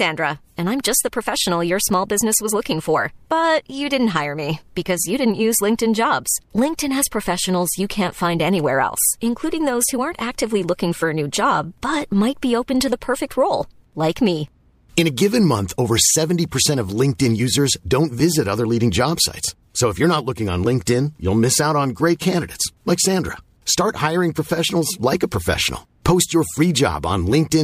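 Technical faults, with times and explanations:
No technical faults are audible anywhere in this recording.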